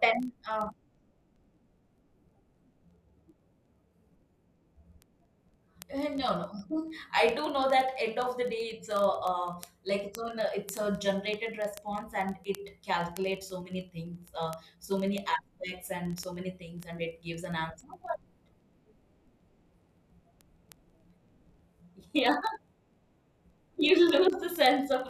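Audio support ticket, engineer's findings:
Receiving device free-running, not locked to sender's word clock over the digital link; clocks off by roughly a tenth of a percent. Each slip drops or repeats one sample. Result: word clock ticks under the speech, 0.12 s to 25.07 s, one roughly every 30 ms, about a thousand in all. Sharp clicks, uneven strength, steady rate. Fix: slave receiver to incoming clock or shared master.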